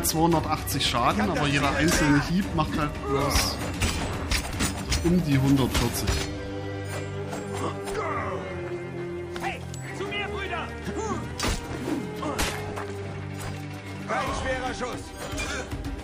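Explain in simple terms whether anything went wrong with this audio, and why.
At 14.21 s there is a repeated buffer. Fresh audio arrived late, so the player replayed its last tiny chunk, about 1.45 ms long, once more. That is too short to hear as a stutter, so it comes through as a single click. No audio goes missing.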